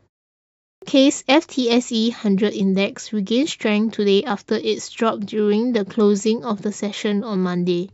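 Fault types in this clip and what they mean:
Clipped start after a pause: after about 0.65 s of initial silence, the output path evidently dozes and takes roughly 170 ms to wake, so the speech beginning near 0.65 s loses its first sounds and appears abruptly. On a waveform or spectrogram, energy starts at full strength near 0.82 s, with no gradual onset.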